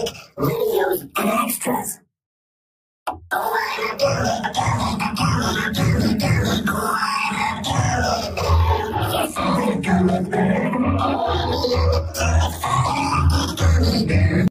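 Nothing here jumps out as a technical problem; there's no glitch, dropout or other fault to point to anywhere along the way.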